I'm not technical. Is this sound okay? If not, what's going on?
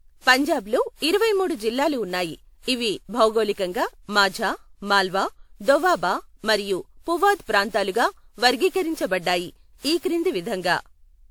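No. From start to finish the speech has generation loss: it sounds swirly, smeared and hollow, with soft, blurred starts to sounds. The likely cause is the recording being squeezed and re-saved about seven times with a lossy format, so the damage piled up.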